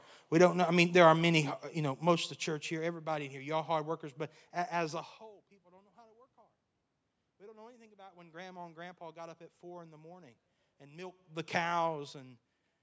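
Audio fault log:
Nothing stood out on listening to this speech recording.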